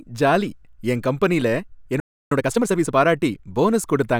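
A speech recording with two linked playback faults. At 2.00 s the audio cuts out mid-flow and stays silent until 2.32 s, a gap of about 312 ms. That is a playback stall. The output simply stops. The likely cause is the player running out of buffered data, or its audio thread being blocked for that long. The speech then resumes, but not at a relaxed pace. From 2.32 s to 2.94 s it is hurried, running at about 1.5 times normal speed. This is time-compressed catch-up. The player is clearing the backlog that built up during the stall. It drops small slices of audio and cross-fades across the joins. Because of that, the pitch stays where it should be. The tempo jumps, though.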